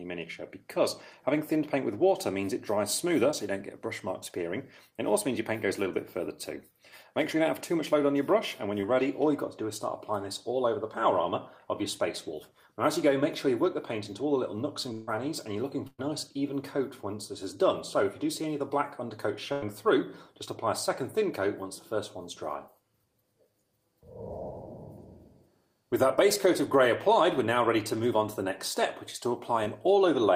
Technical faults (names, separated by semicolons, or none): short concealed packet loss; burst of packet loss